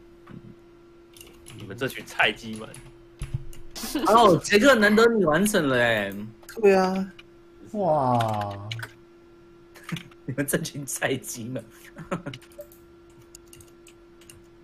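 At 6.10 s a single bit error spike produces one sharp tick. A flipped bit knocked one sample to about -26 dBFS before the signal snapped back. Unlike an edit click or dropout, nothing else changes: the waveform has no gap, step or level shift around it.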